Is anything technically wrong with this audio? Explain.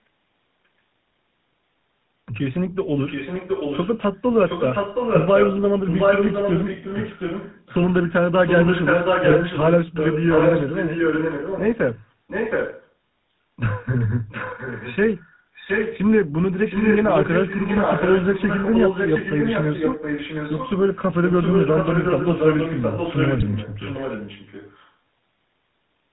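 Yes. Throughout, the GSM full-rate codec, which rebuilds speech from a vocal-tract model fed by sparse regular pulses, gives a buzzy, gravelly roughness and nothing above 4 kHz. Unlike wideband codec smearing, this is a coarse grain on every syllable.

An echo leak, likely from a loudspeaker whose echo canceller let the far end's sound back into its microphone, returns a copy of the speech 0.72 s late. It spans 3.06 to 3.98 s at roughly 10 dB down, 4.47 to 12.88 s at about the same level as the speech, and 14.29 to 15.99 s and 16.64 to 24.91 s at roughly 5 dB down. That long, fixed delay separates it from room reverberation.

GSM bit errors corrupt the decoder's filter, pitch and gain values, causing brief squawks and gargling at 9.28 to 9.33 s and 23.38 to 23.43 s. Each burst lasts about 50 ms, which fits two 20 ms frames, and is a warped burst rather than a clean dropout.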